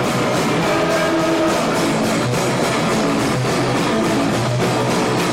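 Nothing is technically wrong with this audio; no faults can be heard anywhere in it.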